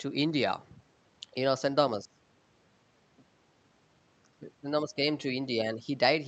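No technical faults can be heard in this speech, which carries only the expected character of a call codec.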